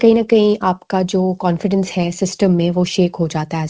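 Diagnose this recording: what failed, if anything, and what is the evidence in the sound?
Nothing has failed: the audio came through a call path whose codec leaves nothing above 8 kHz, which fits wideband G.722 at 64 kbps, and no stage shows a dropout, glitch, or distortion at any point.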